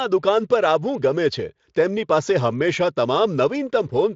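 No technical faults can be heard in this speech, which carries the sound of Speex coding at what seems a fairly generous setting, with the spectrum ending near 7.6 kHz and any trace of the codec faint at most.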